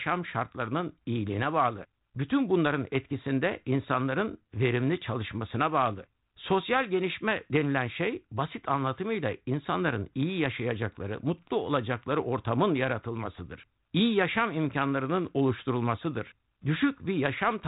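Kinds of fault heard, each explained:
No faults are audible in the speech, so there is nothing to list.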